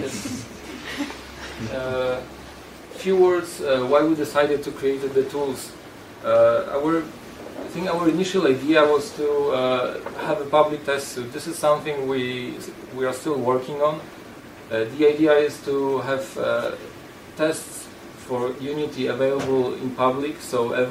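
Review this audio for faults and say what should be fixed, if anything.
Nothing here needs fixing; no faults were heard.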